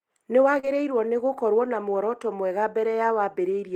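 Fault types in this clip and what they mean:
Short concealed packet loss: About 40 ms of audio arrived too late for the decoder, from 0.59 to 0.65 s, just before "nĩ gũkorwo na". The receiver extended the preceding sound for roughly 35 ms and blended back in, leaving a brief smear or wobble.
Lost packet rebuilt from error correction: A single lost 20 ms packet was replaced by the low-bitrate copy carried in the next packet, so no gap is heard. This happens at 0.63 to 0.65 s and again at 1.93 to 1.95 s after "nĩ gũkorwo na", and both frames sound rougher and noisier.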